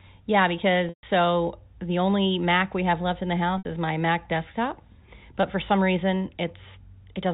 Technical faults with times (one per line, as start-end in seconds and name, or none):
0.89-1.03 packet loss with pitch repetition
3.58-3.65 packet loss with pitch repetition
5.42 packet loss with pitch repetition